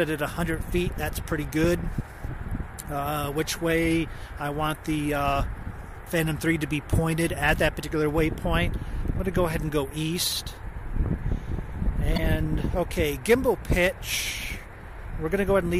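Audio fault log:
12.14–12.19 s, damaged data in a compressed stream: a brief glitch of about 56 ms cuts across the audio where corrupted bytes reached the decoder. Unable to parse those frames, it misreads or drops them until it locks onto the next valid frame header. On a spectrogram this appears as a narrow vertical break in the surrounding pattern. The waveform shows a short, abrupt break in the signal.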